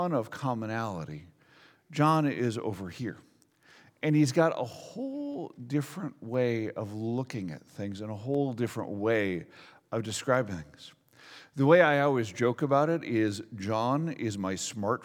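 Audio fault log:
0.33–14.35 s, periodic USB or driver dropouts: about fifteen short ticks, spaced exactly 1.0 s apart. At each one, something blocking the USB bus or audio driver causes a fraction of a millisecond of samples to be skipped outright rather than filled with silence. The waveform jumps straight across the gap, and that discontinuity is heard as a small click. The strict one-second spacing points to a recurring background task.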